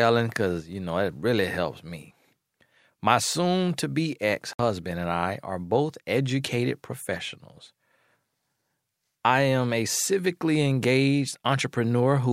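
Speech runs uninterrupted except for one gap at 4.53 to 4.60 s, just after "soon to be ex" and before "and I are both", where the sound drops to clean silence for 62 ms and then carries on. This is likely a Bluetooth stall: radio interference delayed packets until the headphones' buffer emptied. Unlike a lossy dropout, the gap is true silence, not a garbled or smeared stretch.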